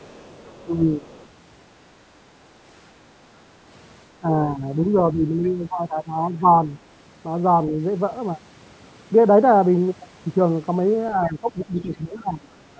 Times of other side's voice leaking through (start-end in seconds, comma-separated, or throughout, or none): 0.00-0.65, 1.04-1.28, 5.44-5.51, 11.62-11.66